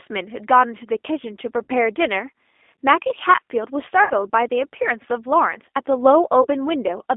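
Throughout, the G.729 codec narrows the band to roughly 250 Hz to 3.6 kHz, and its pulse-based rebuilding, consistent with 8 kbit/s, leaves speech plainly rough and synthetic. At 1.63 to 1.71 s, 4.04 to 4.14 s and 6.42 to 6.47 s, codec-concealed VoIP packet loss turns speech into a fading buzzy or noisy smear as the decoder extrapolates missing frames.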